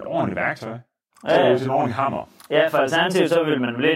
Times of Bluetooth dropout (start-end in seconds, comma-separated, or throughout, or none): none